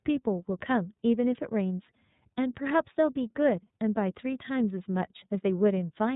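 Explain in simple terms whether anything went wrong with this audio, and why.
The speech went through the iLBC codec, a compression method built for internet phone calls. It cuts the sound into short chunks, here fitting 30 ms pieces, and codes each one on its own, keeping nothing above 4 kHz. That makes the whole clip, from start to finish, sound narrow and telephone-like, with crisp sounds such as s and f dulled, and the speech plainly rough and slightly artificial.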